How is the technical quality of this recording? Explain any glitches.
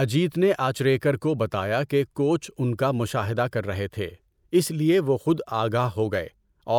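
No technical faults are audible.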